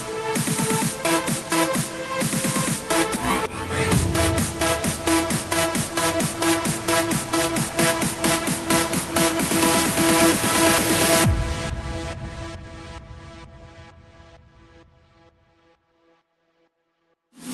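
At 3.16 to 3.18 s a stretch of audio was dropped while later audio was already queued, a skip ahead. Roughly 0.7 s of sound is missing, and playback jumps forward with no gap, the two sides joined almost directly.

From 5.44 to 6.38 s and again from 11.26 to 12.64 s, the jitter buffer held more audio than its target and trimmed short pitch-period pieces to catch up, a jitter buffer speed-up. The sound runs at 103% and then 107% speed with unchanged pitch, around 40 ms and 100 ms removed, so the second passage sounds noticeably hurried. The highs stop near 12 kHz, consistent with the Opus call path at 32 kbps.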